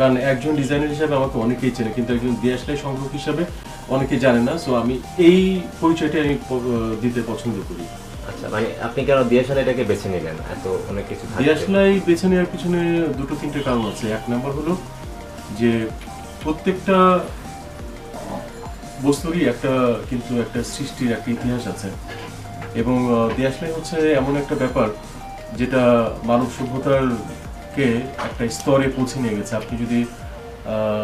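Brief ticks at 3.63 s and 6.29 s are blocks of digital silence, gaps of about 12 ms and 3 ms where the sound cut out, the first fitting a missed 512-sample buffer.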